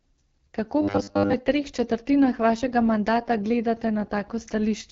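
From the start, the speech carries the sound of the AMR wideband (HD Voice) codec. Nothing reaches above about 7.3 kHz. The codec models speech with a pulse-driven vocal tract filter up to 6.4 kHz and fills the top band with shaped noise. Here the damage is plainly audible. The voice is rough and raspy, which fits a low mode such as 8.85 kbit/s rather than the clearer higher rates.

From 0.81 to 1.34 s, just before "treh četrtinah vašega mandata", the speech turns robotic. It becomes a rigid, metallic buzz at 100 Hz that still roughly tracks the speech. The likely cause is repeated short buffers. New audio arrived too rarely, so the last chunk was replayed to fill the gap while the real audio was skipped. For most of this stretch the sound is repeats. The 100 Hz buzz fits a 10 ms buffer.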